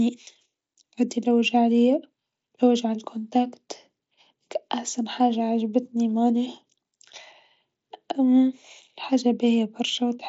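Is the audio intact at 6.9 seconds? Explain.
Yes, the audio at 6.9 seconds is intact, with the speech carried through the mSBC headset codec as normal.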